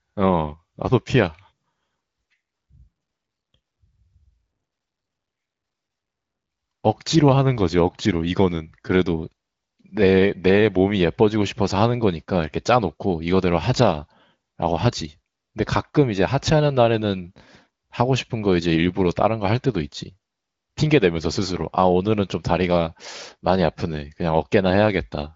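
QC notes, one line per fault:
No faults heard anywhere in this speech recording.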